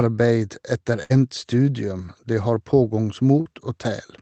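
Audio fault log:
1.03–1.14 s, burst of packet loss: roughly 60 ms of sound never arrived in time, so the receiver continued the last sound and turned it down before the audio picks up further along with a piece missing. Unlike a brief smear, part of the audio is skipped.
3.41–3.47 s, short concealed packet loss: about 40 ms went missing and was patched by continuing the preceding sound, then blended back into the real audio. It comes across as a quick smear or wobble rather than an audible fade and gap, because the hole is too short for the fill to decay.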